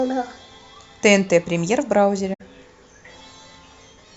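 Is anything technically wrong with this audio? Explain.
Yes. At 2.33 to 2.41 s there is a corrupt frame concealed: bit errors damaged the AAC stream, and the decoder detected them and substituted its own fill, which fits about three lost frames. In the speech this spans roughly 80 ms.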